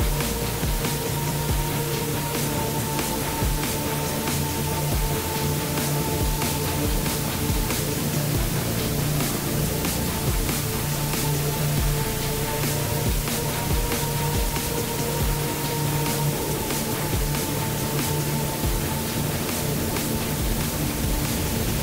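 From start to finish the audio carries low bit depth with dither: only 3 bits are used, and dither added before rounding turns the error into a constant, even hiss nearly as loud as the sound itself. Unlike undithered truncation, it stays smooth rather than gritty.

From 19.86 to 19.91 s there is damaged data in a compressed stream. Corrupted bytes make the decoder misread frames and hunt for the next header, producing a brief glitch.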